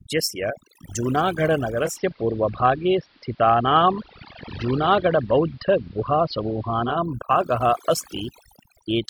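Overdone noise removal runs through the whole recording. A noise reducer set far too hard is shutting off individual frequency bands near its noise estimate, taking quieter speech detail with them. The background drops and breaks up into twinkling specks.

From 1.82 s to 6.98 s, a digital radio blending to analogue occurs. The receiver loses the digital stream and cross-fades over 167 ms to the AM broadcast, then back. A faint hiss rises well below the voice, and the level shifts by about 1 dB.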